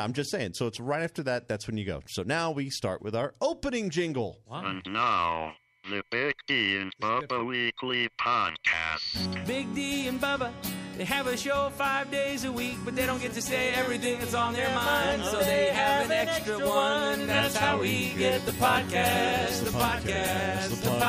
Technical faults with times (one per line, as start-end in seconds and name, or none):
18.55 dropped buffer (overrun)